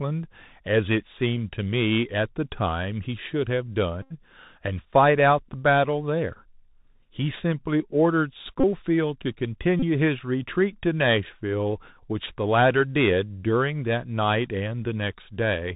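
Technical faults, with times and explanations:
Throughout: Bluetooth CVSD headset codec. The speech is cut off above 4 kHz, and a granular hiss sits underneath. Loud high-frequency sounds outrun the adaptive one-bit step size and distort, and s sounds turn scratchy. This fits a 64 kbit/s CVSD headset link.
4.02–4.12 s, 8.60–8.64 s and 9.80–9.84 s: Bluetooth headset packet repeated. The headset link lost audio for about 79 ms, 34 ms and 30 ms, and the last good packet was decoded over and over. Repeating every 3.75 ms, it makes a steady buzz near 267 Hz until clean packets resume.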